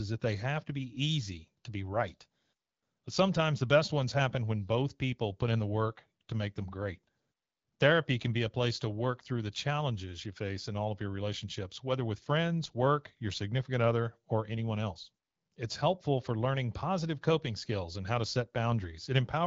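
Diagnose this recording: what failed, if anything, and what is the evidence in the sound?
Nothing in the speech points to a failure at any stage; the signal has the character of the AMR wideband (HD Voice) codec at about 12.65 kbit/s, with the speech band modelled up to 6.4 kHz, shaped noise filling the range up to 7 kHz, and only a light trace of the coding on the sound.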